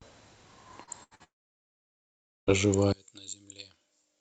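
A speech recording carried over a call link whose coding cuts the spectrum off near 8 kHz. At 0.83 to 0.90 s there is a short concealed packet loss: about 40 ms never arrived and the receiver patched it by extending the preceding sound, heard as a brief smear. On a spectrogram it shows as a short stretch of smoothed, continued sound instead of fresh detail. Two bursts of packet loss follow, at 1.03 to 1.14 s (about 80 ms missing) and 1.15 to 1.23 s (about 40 ms). Each time the last sound is stretched into a held buzz or hiss that fades before the audio resumes further on, so the waveform shows a decaying envelope with a jump at the resume point. From 1.24 to 2.50 s comes a long network dropout, likely a complete interruption of the stream. A brief fading continuation gives way to about 1.19 s of silence, a flat line in the waveform and an empty band on the spectrogram, and the part of the speech in that stretch is lost. 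From 2.92 s to the end the level falls by about 24 dB and the remaining sound is a faint copy. This fits what one channel inverted sounds like on a mono fold-down, with the centred speech cancelling and only the small difference between channels surviving. The waveform shrinks sharply there.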